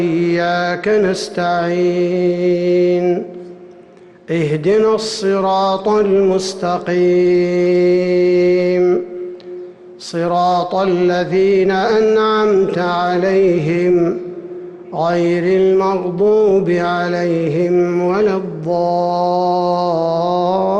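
There are no technical faults to describe.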